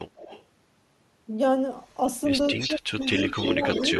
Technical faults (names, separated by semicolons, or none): echo leak; speech suppressed in double talk